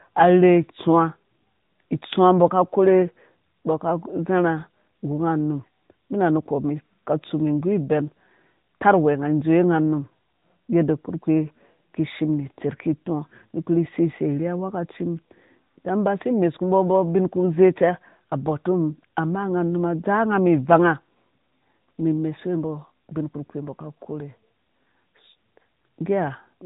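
From start to finish the speech carries the sound of the AMR narrowband mobile codec. The signal has been squeezed through an 8 kHz phone-band coder that rebuilds each 20 ms frame from a vocal-tract model and a few pulses, leaving a plainly audible buzzy, synthetic edge that fits a mid-rate mode near 10.2 kbps. On a spectrogram everything stops abruptly at 3.8 kHz, with empty space above.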